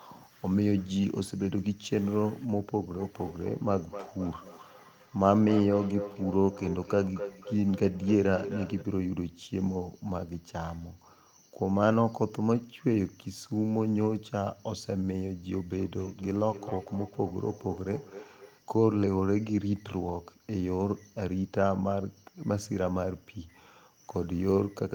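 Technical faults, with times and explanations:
2.89–8.88 s and 15.72–18.61 s, feedback echo between two devices: the speech comes back roughly every third of a second, peaking at about 11 dB, then about 16 dB, below the speech. A second device in the room replays the audio into the mic, and the echo canceller doesn't catch it.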